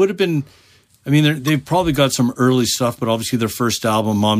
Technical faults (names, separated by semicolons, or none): corrupt frame decoded